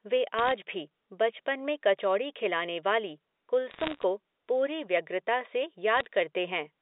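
Short bursts of sharp ticks and crackle break over otherwise unchanged speech at 0.39 to 0.52 s, 3.71 to 4.03 s and 5.97 to 6.05 s, the middle burst being longest and densest. These are bit errors on a digital phone line: flipped bits in the G.711 A-law stream, at a rate somewhere under one percent, each corrupting a single sample, with sign or high-order hits producing the loudest clicks. The telephone band itself sounds intact, running from 250 Hz to 3.7 kHz.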